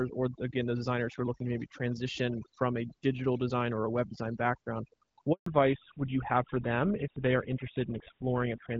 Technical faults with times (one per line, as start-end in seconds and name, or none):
0.00-8.80 overdone noise removal
5.32-5.46 handover gap
5.46-8.80 fallback to narrowband